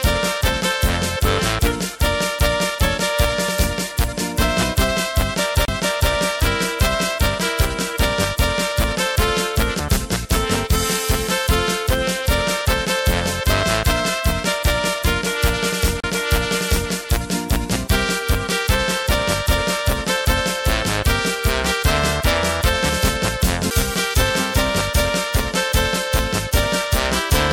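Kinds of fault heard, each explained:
CD skip: the laser pickup loses its track and lands on another turn of the spiral, so the player briefly mutes and resumes from a different point in the material. Here this happens three times, at 5.65 to 5.68 s, 16.00 to 16.04 s and 23.70 s. Each is heard as a tick with a dropout of a few tens of milliseconds or less, the last being very short, followed by an abrupt discontinuity where playback picks up elsewhere.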